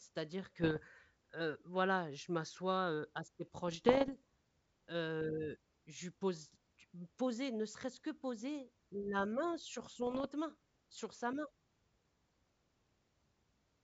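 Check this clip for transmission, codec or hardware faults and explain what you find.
Three short bursts of bit errors on an ADPCM link damage this speech, heard over G.722 wideband telephone coding, whose light upper-band hiss fits its full 64 kbit/s mode.

The bursts run 0.62–0.80 s, just before "heu voilà je m'assois"; 3.68–4.16 s, after "je m'assois heu assez"; and 9.94–10.27 s, between "poser la main sur" and "main sur sa main". At around half a percent of bits, each flip throws off the decoder's step size and predictor, leaving rough pops with brief level swings rather than the silent gaps or repeats of packet loss.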